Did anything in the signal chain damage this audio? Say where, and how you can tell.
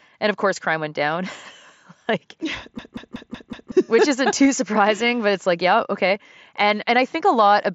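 Yes. The driver or buffer stage failed with a system hang loop from 2.79 to 3.72 s, ending just before "which isn't". The host stalled while the audio hardware kept replaying the same stretch of its ring buffer. One segment of about 186 ms, which fits an 8192-sample buffer, repeats five times at 5.38 Hz. Because the loop is that long, it comes across as a machine-gun stutter rather than a buzz, and roughly a second of real audio never arrives.

The Bluetooth link shows concealed Bluetooth headset packet loss at 4.45 s, between "which isn't" and "surprising but it's like", and again at 6.15 s, just after "but it's like yeah". In each case about 7.5 ms went missing, which is consistent with a single dropped radio frame. The receiver filled each gap by continuing the preceding waveform, so both are only faint glitches. The mSBC wideband codec carrying the call can be heard doing its normal band-limiting around these points.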